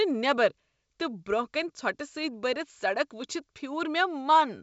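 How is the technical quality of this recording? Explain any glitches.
No glitches or technical faults can be heard in this speech recording. It carries the sound of G.722 wideband telephone coding at 64 kbit/s, with nothing above about 7.7 kHz and at most a faint trace of coding hiss in the upper band.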